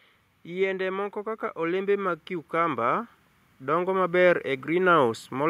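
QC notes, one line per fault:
0.43–5.45 s, automatic gain rising: the level climbs steadily by about 9 dB across nearly the whole speech clip, voice and background noise swelling together, because the automatic gain control judged the input too quiet and kept raising its gain gradually rather than in a single step.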